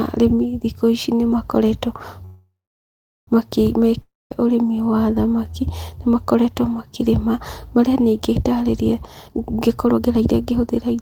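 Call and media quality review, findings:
Call audio freeze, 2.25–3.29 s, right after "arĩmi thĩkũ ĩcĩ nĩmakoretwo": last sound smeared into a fading buzz, then about 0.75 s of silence, speech resumes where it stopped. Likely jitter buffer underrun from held-up packets. Roughly 1.02 s gap inserted, nothing lost, delay grows by the same.

Long network dropout, 4.01–4.32 s, just before "ũrĩmĩ wa thamaki nĩmakoretwo": brief fading buzz, then about 0.21 s silence. Speech returns further on. Likely network loss. Roughly 0.3 s of audio never played.

Jitter buffer speed-up, 9.28 s to end, after "makĩrĩma marĩa nĩe ĩngĩtarĩrĩa": speech hurried, running at 128% speed with unchanged pitch. Buffer over target, so receiver trims pitch-period slices repeatedly, about half a second removed in total.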